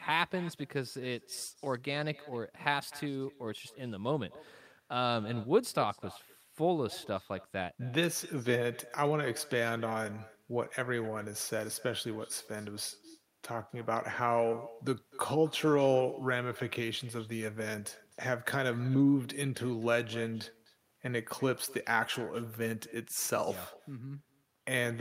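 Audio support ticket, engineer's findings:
Echo with no canceller, throughout. Speech shadowed by a quieter, thinner copy about 20 dB down, roughly 300 ms late. Far end on loudspeaker, mic recapturing playback, no echo cancellation removing it before the network return path.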